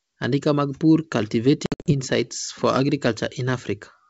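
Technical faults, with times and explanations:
1.66–1.93 s: packet loss on an ADPCM call. Silent holes totalling 160 ms, longest 60 ms. Sound returns slightly distorted, since the decoder's predictor has drifted from the sender's.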